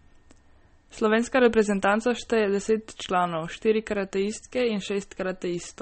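From start to end the speech carries plain MP3 compression damage, likely from a very low bitrate near 33 kbps. Nothing remains above 8.4 kHz, so the treble is cut off. Weak frequency detail flickers between frames. The result sounds watery and swirly.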